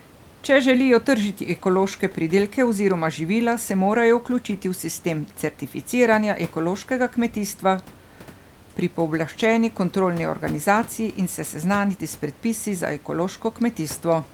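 Speech recording with no technical faults detected; the only background is ordinary room noise sitting about 26 dB below the speech.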